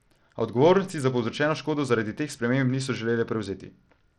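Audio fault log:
throughout, Bluetooth SBC compression: the speech has a gritty, grainy edge and the top end thins out and flickers, likely from an SBC link starved of bits, which fits a stream around 80 kbps, where the upper sub-bands get dropped and the rest coarsely quantised.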